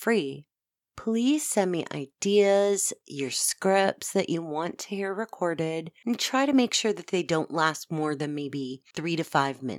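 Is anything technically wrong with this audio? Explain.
No, nothing is technically wrong with this audio.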